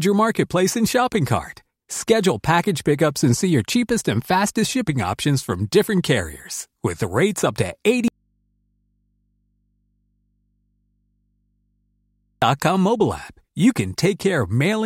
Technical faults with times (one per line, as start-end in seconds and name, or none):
8.08-12.42 audio dropout to a faint residue